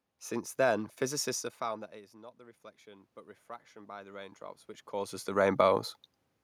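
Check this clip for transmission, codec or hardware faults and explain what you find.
One fault is present, an automatic gain control adjustment; the rest reflects the recording itself.

Automatic gain rising runs from 1.64 to 5.22 s, starting just after "then physicists have". Around 1.5 s the level reaching the microphone falls by about 22 dB as the talker moves away, and the gain control responds by lifting its gain by about 7 dB over roughly three and a half seconds. The voice slowly swells back, and the room noise rises with it. That shared swell is what separates it from the talker movements near 1.5 s and 4.5 s, where only the voice changes level and the background stays steady.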